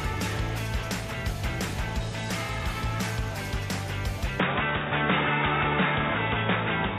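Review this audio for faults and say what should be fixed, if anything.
At 4.40 s the sound abruptly turns dull and boxy, with nothing above 3.8 kHz, a shift in level of roughly 5 dB and a faint new noise floor, with no gap. That's likely the input switched to a poorer device. Lock the input device before recording and turn off automatic switching.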